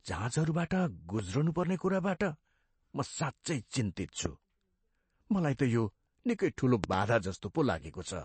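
It's a speech clip with plainly audible MP3 compression throughout. Nothing comes through above 8.4 kHz, and the damage sounds like what you'd get from a low bitrate, something around 37 kbps. When the encoder runs out of bits, it drops weaker frequency lines that then flicker in and out from frame to frame. That gives the speech a watery, swirly quality, and consonant attacks get smeared. Add the fixed treble cutoff and the top end ends up dull.

On top of that there are loud pops, most likely from a voltage step or pulse getting into the signal, such as a plug, a switch, static or a driver glitch, while the speech carries on underneath. There's a single pop at 1.19 to 1.22 s, about 10 dB above the speech, and another at 4.26 to 4.28 s, about 15 dB above. Between 6.84 and 6.96 s there's a pair in quick succession, peaking about 20 dB above the speech.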